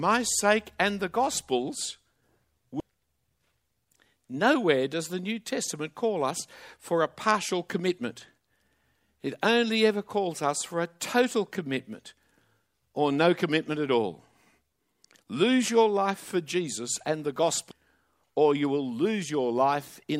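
A speech recording with two short bursts of damaged data in a compressed stream, at 2.80 s and at 17.71 s, the second right after "and the". At each point corrupted bytes make the decoder misread a frame and lose sync before locking onto the next header, giving a tiny chirp or blip. On a spectrogram each shows as a thin broadband vertical streak, and on the waveform as an abrupt spike or discontinuity.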